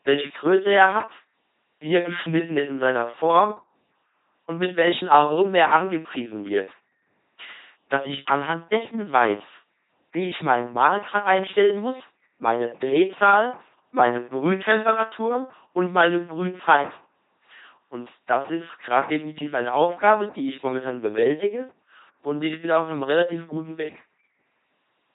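From start to finish the speech runs through an LPC-10 vocoder, rebuilt from pulse-train or noise excitation through a short filter. The result is heavy, buzzy robotic damage, fitting a 2.4 kbit/s rate. Spectrograms show rigid harmonic stripes or flat noise, with nothing above 3.8 kHz.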